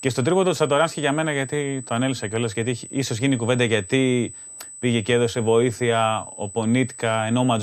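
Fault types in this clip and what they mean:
USB whine: a steady 8 kHz tone from USB microframe current leaking in through the power or ground, sitting roughly 20 dB under the speech the whole way.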